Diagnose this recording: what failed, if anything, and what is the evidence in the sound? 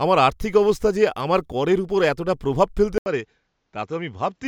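Input switched to a poorer device, at 2.98 s: after a gap of about 80 ms, the speech loses everything above 7.6 kHz, drops roughly 5 dB and gains a new noise floor about 50 dB down. At the driver stage, the input was likely rerouted to a narrower-band microphone.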